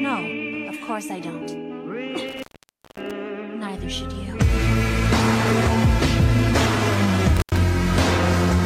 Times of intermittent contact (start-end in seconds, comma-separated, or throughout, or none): 2.29-3.11, 7.37-7.57